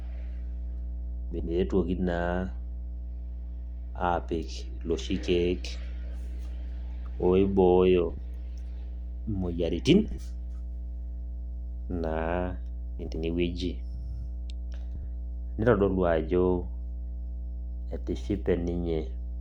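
A ground loop or nearby transformer is coupling the 60 Hz power line into the signal for the whole clip. The result is a steady low mains hum, fairly prominent at roughly 10 dB below the speech, sitting underneath everything.

Neighbouring runs of frames were delivered and decoded in swapped order at 1.31–1.50 s, 8.09–8.19 s, 10.05–10.20 s, 13.00–13.16 s and 14.95–15.04 s. Each of these frames-out-of-order passages plays its two halves exchanged, in blocks of 40 to 80 ms that fit 20 ms frames. Each is heard as a brief garbled flutter, and no time is lost.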